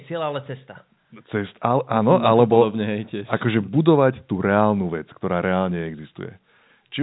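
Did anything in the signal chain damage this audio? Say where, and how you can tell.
No, nothing in the chain did any damage here: the speech just carries the usual narrow telephone band from the G.711 line coding, with nothing above 4 kHz, plus the normal bass trim from the call's microphone processing, and none of that counts as a fault.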